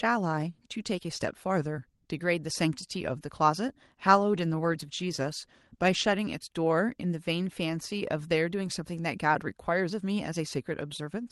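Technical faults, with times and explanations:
4.16–6.31 s, call bitrate drop: The speech turns rough and watery and loses some of its brightness. The coarseness fits the Opus encoder being pushed from about 32 kbps down to around 18 kbps for roughly 2.1 s after the call's bandwidth estimate fell. With fewer bits per frame, quantisation noise rises and fine spectral detail is smeared. Top-end detail thins compared with the 12 kHz band heard elsewhere in the call path. Clarity returns as the rate recovers.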